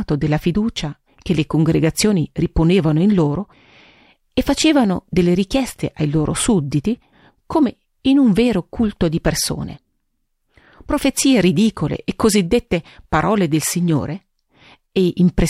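A speech recording with no technical faults to point to. Nothing in the recording calls for a time mark or a cause.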